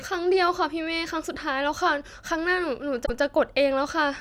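A speech clip with a repeated-frames fault: the stretch from 3.05 to 3.20 s, about 157 ms long, plays once more right after itself, producing a single stutter and lengthening the audio by that same 157 ms. The repeat is an exact copy of real audio, which fits a run of about six compressed frames being written or sent twice. A dropout would leave silence and an echo would decay, but here the content itself plays again.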